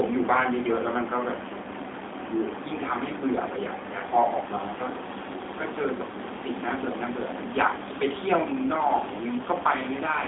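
All the way through, the speech has that G.729 codec sound: rebuilt from a filter and pulses, slightly rough and synthetic, nothing above 3.8 kHz, fitting 8 kbit/s G.729A.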